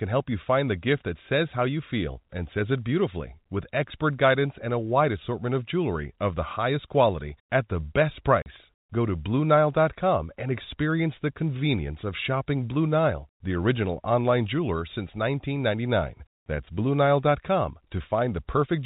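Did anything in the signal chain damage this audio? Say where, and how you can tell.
Yes, at the network stage: packet loss filled with silence. Audio went missing from 8.42 to 8.46 s, and the receiver played silence in its place, leaving a 40 ms hard-edged hole in the speech. That length fits two lost 20 ms packets. The G.711 telephone coding shows its expected 4 kHz band limit.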